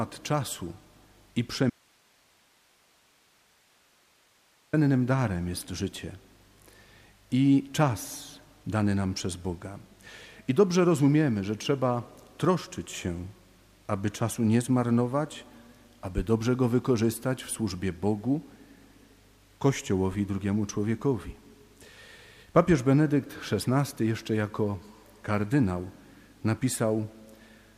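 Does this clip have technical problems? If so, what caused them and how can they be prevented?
Yes. An audio dropout to a faint residue runs from 1.70 to 4.73 s: the sound cuts off abruptly for about 3 s and only hiss remains, roughly 40 dB below the normal level, before it snaps back mid-flow. The path after the break stayed live while the wanted signal vanished upstream, likely from a momentary loss at a connector, cable or wireless link. Securing connections and monitoring the input during capture prevents it.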